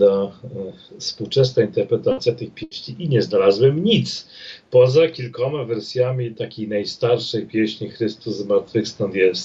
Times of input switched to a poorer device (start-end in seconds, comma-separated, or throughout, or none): none